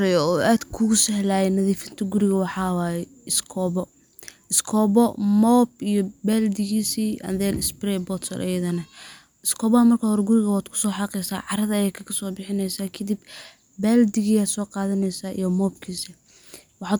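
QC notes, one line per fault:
No faults found on this speech recording; nothing to log.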